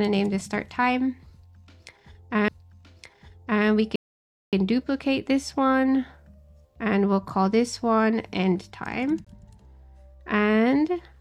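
At 2.48 s a CD skip occurs: the laser jumps to another turn of the disc's spiral, leaving a tick and a mute of a few milliseconds before the sound carries on from a different point. It shows as a thin vertical line on a spectrogram and a discontinuity in the waveform, repeated at 9.25 to 9.27 s with a mute of about 20 ms.

From 3.96 to 4.53 s a rebuffering stall cuts the sound to silence for 0.57 s while the player waits for more data, then resumes exactly where it stopped. The waveform goes flat and the spectrogram shows a blank gap.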